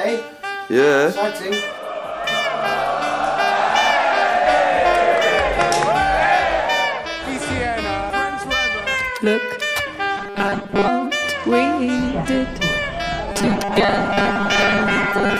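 Robotic sound from repeated short buffers occurs from 10.18 to 10.88 s and from 13.32 s to the end. The sound turns into a rigid, metallic 200 Hz buzz. Most of the first stretch is repeated, about half of the second. The likely cause is late audio, with a 5 ms chunk looped.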